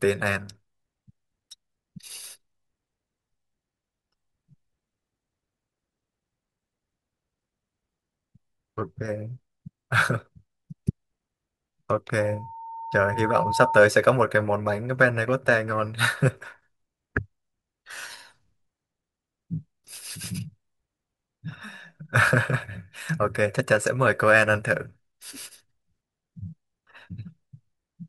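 At 12.21 s a loudspeaker feedback squeal begins: the microphone is hearing its own loudspeaker, and at 908 Hz the loop gain passes unity, so that tone feeds on itself. It swells over roughly a second and a half to sit about 5 dB above the speech, then stops at 13.81 s. On a spectrogram it is a single bright horizontal line at 908 Hz, growing stronger. The waveform envelope balloons steadily.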